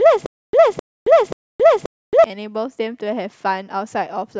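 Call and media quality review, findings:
Stutter with silent gaps, 0 to 2.24 s, already going when the speech starts. Same 260 ms fragment replays three times, each followed by about 270 ms of dead digital silence, so a steady 532 ms cycle. Likely a stalled player or stream buffer re-serving its last chunk on each retry, then running dry. Audio from that window is gone, not just delayed.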